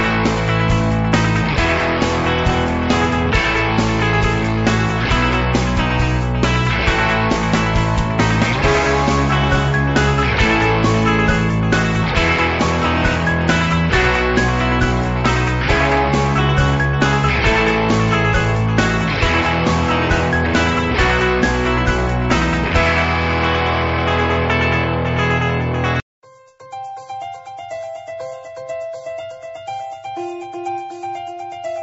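No technical faults are audible.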